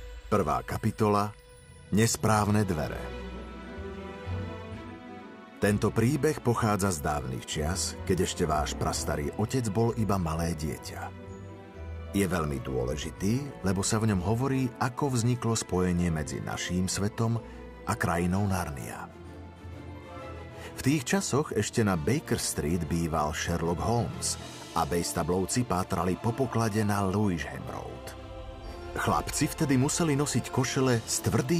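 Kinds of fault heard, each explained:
No technical faults detected.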